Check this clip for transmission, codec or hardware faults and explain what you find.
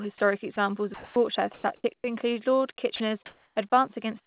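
Several faults point to a voice detector with discontinuous transmission on the sending side of the call. The audio itself stops at 4 kHz, which fits G.711 mu-law at 64 kbps.

Sound dropped by the voice detector, at 0.18–0.20 s, 0.54–0.56 s, 0.94–1.16 s and 2.96–3.00 s: the sender likely judged quiet speech to be background and stopped sending. The receiver filled each gap with comfort noise, so speech briefly gives way to a steady hiss. The longest gap, 220 ms, loses about 80 ms of speech.

Sound chopped by the voice detector, from 1.54 to 2.04 s: the detector likely flipped between sending and not sending more than once. About 280 ms of that half second became synthetic noise, so the speech sounds choppy.

Comfort noise in place of the background, from 3.26 to 3.56 s: transmission likely paused during a speech gap, and the receiver generated noise shaped roughly like the background. The real background, about 39 dB below the loudest speech, is replaced by a featureless hiss about 1 dB quieter.

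Onset clipped by the voice detector, at 3.54–3.56 s: the detector was likely slow to notice speech resuming, so the first 20 ms were never sent. Comfort noise covers that moment, and the speech starts abruptly without its soft beginning.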